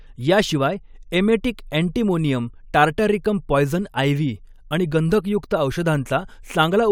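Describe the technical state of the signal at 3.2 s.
At 3.2 s the speech signal is intact, with no audible fault at that moment.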